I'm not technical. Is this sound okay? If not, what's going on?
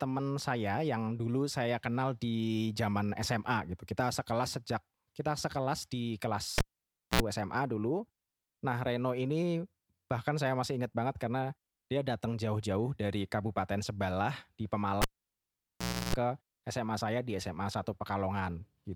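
No. Twice the speech pops, drops out, gives a short 60 Hz hum, then pops back: at 6.58 to 7.21 s after "sejak kita sekelas di", and 15.02 to 16.15 s after "sebelah di". That's a cable pulled and plugged in: a live lead yanked, then its tip touching before it seated fully.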